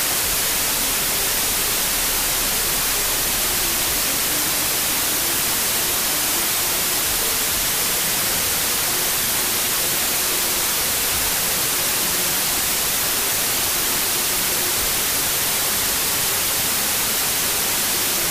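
Across the whole recording, the data were read with the wrong sample width. The slowdown to two-thirds speed fits packed 24-bit samples being read as 16-bit ones. Some pairs of bytes straddle the boundaries of the original three-byte samples, so most values mix unrelated bytes, and only some carry the real signal's upper bits. The result is loud, dense noise with the original sound buried underneath, playing slow at about 0.667 times speed, with its pitch lowered by the same ratio.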